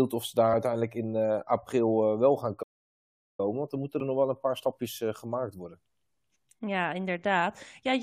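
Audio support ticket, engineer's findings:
Damaged data in compressed stream at 0.52 s (after "of ze daar"), 4.0 s (after "dan moeten") and 6.35 s: short blips. The decoder misreads corrupt frames, loses sync and skips to the next header.

Playback stall at 2.62–3.40 s, after "april eh wel gaan": speech cuts out for about 0.76 s, then resumes. Likely cause: player buffer ran dry or its thread was blocked.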